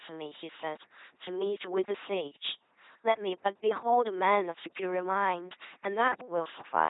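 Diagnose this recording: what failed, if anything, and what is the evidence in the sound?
The failure is at the codec stage: the whole clip passes through an LPC-10 vocoder, with heavy damage. The speech turns into a buzzing, mechanical robot voice, and nothing sounds above 3.8 kHz. That fits 2.4 kbit/s LPC-10, which drives a short all-pole filter with either a pulse train or noise. Unlike CELP smearing, each moment flips wholly between buzz and hiss.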